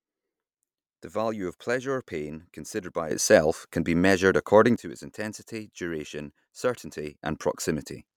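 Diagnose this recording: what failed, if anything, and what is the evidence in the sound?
The speech jumps up by about 11 dB at 3.11 s and falls back at 4.76 s. It jumps again by about 8 dB at 7.23 s and stays raised to the end. Each sudden gain jump lands within a single sample, and the background noise rises and falls with the speech. That rules out a talker moving closer to the microphone. The likely cause is a digital gain setting applied without a ramp in the processing chain. An automatic gain control would ease in over tens of milliseconds.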